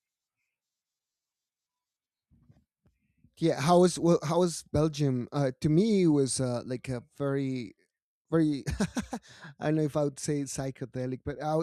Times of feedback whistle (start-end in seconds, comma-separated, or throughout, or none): none